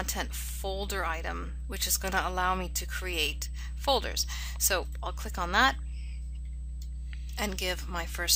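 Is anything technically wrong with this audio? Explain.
Yes. USB whine runs throughout: a fixed 8 kHz tone, roughly 35 dB below the signal, from 125-microsecond USB microframe current draw leaking through power or ground.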